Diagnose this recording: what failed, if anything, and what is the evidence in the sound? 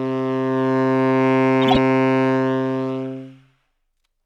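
Codec stage: a corrupt frame decoded from 1.62 to 1.77 s in this everyday-sound recording, a loud burst peaking near -5 dBFS. Damaged bits across several frames were decoded anyway, misplacing spectral energy. Unlike packet-loss concealment, which mutes or smears, this adds foreign, harsh content.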